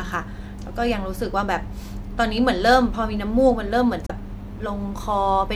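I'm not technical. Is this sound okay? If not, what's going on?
No. Between 4.07 and 4.11 seconds the speech is interrupted by a brief chirp or blip, caused by damaged data in a compressed stream. Audio like this is stored in small packed chunks that a decoder unpacks one after another. A stretch of those chunks got corrupted, so the decoder couldn't read them properly, lost its place, and had to hunt for the next clean chunk. That short scramble is the glitch you hear.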